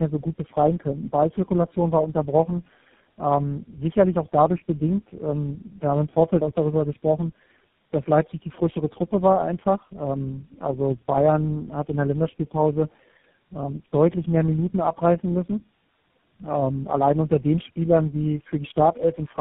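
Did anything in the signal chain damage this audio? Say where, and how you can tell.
Yes. The damage sits at the codec stage and runs through the whole clip. This is tandem speech coding. The speech sounds rough and noisy throughout, with a muffled, warbly quality. Nothing is present above 3.8 kHz. The character points to four low-rate speech coders in a row, likely G.729A, G.723.1, iLBC and finally GSM full rate, joined by 64 kbit/s G.711 links. Each border decodes and re-encodes. Every coder models already degraded speech, so the errors stack.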